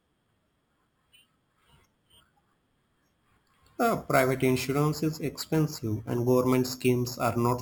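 Throughout the speech runs imaging from sample-and-hold upsampling, which fits each sample of 12 kHz audio being repeated to reach 48 kHz. A mirrored copy sits between 6 and 12 kHz, about 19 dB down, heard as metallic fizz tracking loudness; spectrograms show inverted formants there, waveforms tiny stair-steps.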